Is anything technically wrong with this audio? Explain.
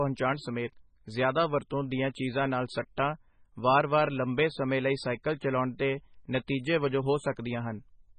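Yes. Throughout the speech the sound is watery and swirly, with smeared attacks and nothing above 9 kHz. This is likely heavy MP3 compression, fitting a bitrate near 16 kbps: short of bits, the encoder cuts the treble and lets weak frequency lines flicker between frames.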